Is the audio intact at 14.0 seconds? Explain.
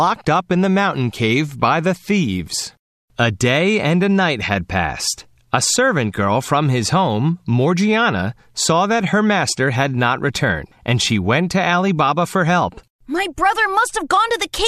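Yes, the speech is intact at 14.0 seconds, with no fault present at that moment.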